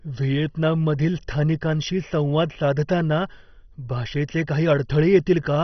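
Speech runs through heavy MP2 compression for its whole length, likely from a very low-rate encode around 32 kbps. Nothing survives above 6.1 kHz, so it sounds dull and gurgling. A spectrogram shows a flat ceiling there, with upper sub-bands flickering on and off below it.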